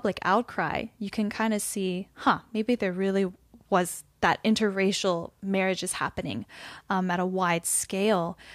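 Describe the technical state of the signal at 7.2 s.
At 7.2 s the speech signal is intact, with no technical fault present at that moment.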